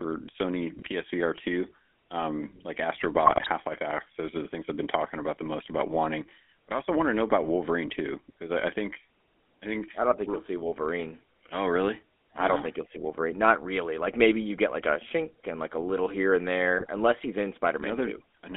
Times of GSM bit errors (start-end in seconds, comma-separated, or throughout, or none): 0.78-0.89, 3.26-3.50, 16.78-16.89